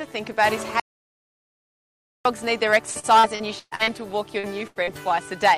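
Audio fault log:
0.80–2.25 s, audio dropout to silence. The sound cuts off mid-flow and returns about 1.45 s later. The gap is digital silence with no room tone at all. The input was likely lost while the recorder kept writing silence, so that stretch of audio is gone.
2.91–3.90 s, repeated packet loss with a robotic sound. Seven gaps arrive in quick succession, the longest 121 ms, with about 360 ms missing in total. Each hole is patched by stretching the last sound, so about a third of this span is synthetic. The result is choppy, with pieces missing.
4.39–4.46 s and 4.83–4.90 s, short concealed packet loss. Each time about 40 ms failed to arrive. The receiver bridged it by continuing the preceding sound and then blending back into the real signal. Each one is heard as a brief smear or wobble.
4.67–4.78 s, burst of packet loss. About 80 ms in a row went missing. The last sound is held and faded while the gap lasts, which gives a short buzz or hiss. 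Playback then resumes further on, and the audio in between is missing.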